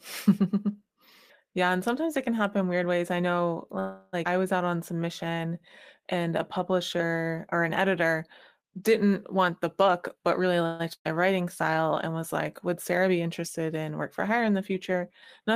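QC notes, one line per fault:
3.79–4.15 s, call audio freeze: the sound stops moving forward and the last fragment is drawn out as a fading buzz or hiss for about a third of a second (334 ms). Packets were likely held up in transit and the jitter buffer ran dry, so the receiver extended what it already had. When the audio resumes it continues exactly where it stopped, so a 334 ms pause has been inserted and nothing is lost.
4.25–4.27 s, skip ahead: just after the freeze, playback jumps forward. Roughly 200 ms of sound is missing, and the material on either side is butted together almost directly. A stretch of audio was dropped, either in transit or by an overfull buffer, while later audio was already queued.
4.65–5.55 s and 6.01–7.37 s, jitter buffer slow-down: the pitch holds steady but the delivery turns slow and stretched. It plays at 88% speed in the first stretch, which adds 112 ms, and at 91% in the second, which adds 126 ms. 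To build a reserve, the receiver repeated individual pitch periods and slivers of pauses many times in a row. This lengthens sounds without lowering them.
9.34–10.61 s, jitter buffer speed-up: the sound rushes along at about 117% speed with the pitch unchanged, and roughly 200 ms is taken out in total. The buffer held more audio than its target, so the receiver trimmed short slices of one or a few pitch periods, over and over, to pull the delay back down. The result sounds hurried rather than higher.
10.66–10.81 s, call audio freeze: a second, shorter stall. The last sound is held as a fading buzz or hiss for 133 ms before playback carries on from the same point. As with the first freeze, this points to late packets leaving the jitter buffer empty. Nothing is dropped, but the pause adds 133 ms of delay and briefly interrupts the flow.
10.93–11.15 s, burst of packet loss: a run of packets went missing or arrived too late to play. 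The receiver extended the last sound for about 115 ms while fading it down, and about 70 ms of that is effectively silent. Playback then picks up further along, with about 120 ms of the original sound absent, so the gap hides a real loss.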